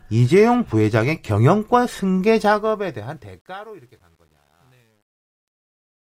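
A speech recording whose fade-out turns gritty from 2.41 s, then is at its worst from 3.33 s to the end at 6.03 s. This is truncation distortion on a fade: the fade stage drops low bits without dither, consistent with roughly 10-bit resolution, so the quiet waveform collapses into coarse steps.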